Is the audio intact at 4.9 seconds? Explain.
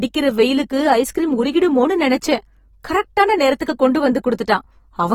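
No, at 4.9 s the speech sounds smeared and warbly, as it does throughout, with nothing above 19.4 kHz. This is likely AAC compression, coarsely quantising each frame's spectrum at roughly 44 kbps.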